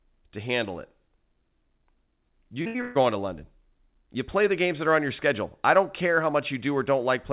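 At 2.62 s a short concealed packet loss drops about 40 ms of the speech. The receiver fills the hole with 31 ms extrapolated from the last sound. It comes across as a quick smear rather than a gap, which tells it apart from an audible dropout.

That loss runs straight into a burst of packet loss from 2.67 to 2.76 s, where 80 ms is missing. Across 71 ms the last sound is carried on and faded. A second burst follows from 2.81 to 3.02 s, losing 140 ms. That one is concealed over 137 ms and leaves the timing about 16 ms longer. Unlike the brief smear, these bursts turn into a held, dying buzz or hiss, and the speech picks up later with material skipped. Throughout, the narrowband call audio has nothing above 4 kHz, which fits G.711.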